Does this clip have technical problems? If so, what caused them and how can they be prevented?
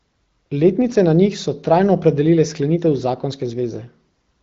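No, there are no technical problems in this speech clip. It has passed through the AMR wideband (HD Voice) codec at 15.85 kbit/s, so nothing is heard above about 7.6 kHz, and the coding leaves only a light trace at that rate.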